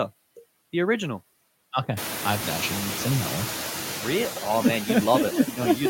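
A speech recording in which the background noise sinks between phrases and swells back up underneath them throughout. These are noise suppressor artifacts: frame by frame, a processor pulls down every band it judges to be steady noise, cutting it by about 13 dB in the gaps. The effect is easier to hear once the room noise climbs by about 21 dB around 2 s, to about 10 dB below the speech. From 2.74 to 2.90 s, between "I've actually" and "seen that one", the sound turns into a steady 100 Hz buzz. This is a system hang loop: the computer or its audio driver stalled while the sound hardware kept replaying a single 10 ms stretch of its buffer, 16 times in a row. That replaced roughly 150 ms of the real audio, which is missing from the clip.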